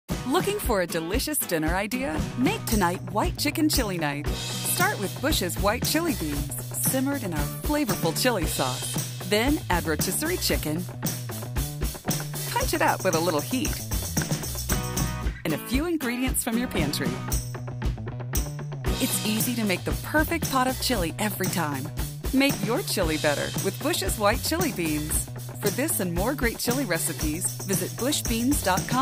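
No technical faults are audible.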